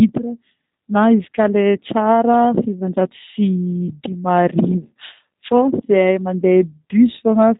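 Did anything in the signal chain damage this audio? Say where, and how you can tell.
Yes, G.729 codec damage throughout. The speech has nothing above 4 kHz and sounds rough and synthetic, consistent with 8 kbit/s pulse-based rebuilding.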